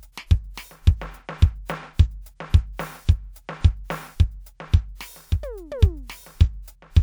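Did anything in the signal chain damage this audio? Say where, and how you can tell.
No, nothing in the signal chain audibly damaged this music clip. No stage, from wiring through conversion to playback, leaves a mark that can be heard.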